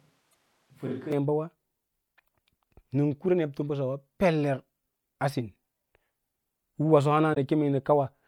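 Right from the start the speech already sounds roomy and hollow, thin in the bass and about 5 dB quieter, with room noise coming up to roughly 35 dB below the speech. That's most likely a switch to a distant microphone, with the close mic's signal missing and something further off picking it up. It snaps back to the close, fuller sound abruptly at 1.12 s.

Inside that stretch, from 0.30 to 0.34 s, there's a short glitch, and another from 7.34 to 7.37 s. Both are damaged data in a compressed stream. Data in the file was corrupted, so the decoder misread those frames, lost sync and jumped ahead to the next frame header it could find. That garbled decode is what you hear.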